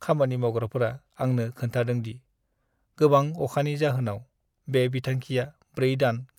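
No technical faults can be heard anywhere in this speech recording. Nothing in the audio breaks up, drops out or distorts at any point.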